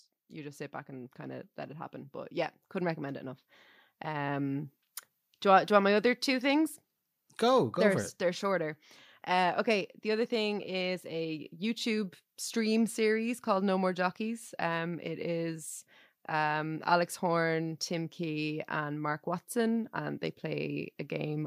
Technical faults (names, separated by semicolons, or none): automatic gain rising; automatic gain falling